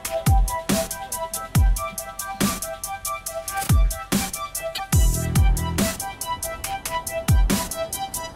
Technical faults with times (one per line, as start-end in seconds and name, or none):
4.72-4.80 damaged data in a compressed stream